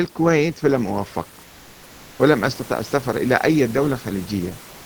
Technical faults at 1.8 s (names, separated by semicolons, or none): comfort noise in place of the background